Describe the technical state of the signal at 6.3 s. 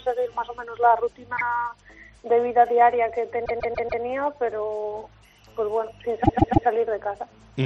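At 6.3 s the sound stutters: a 144 ms fragment plays and then repeats three more times, from 6.23 to 6.66 s. These are repeated frames, a block that fits about six compressed frames sent or written again, lengthening the audio by 432 ms.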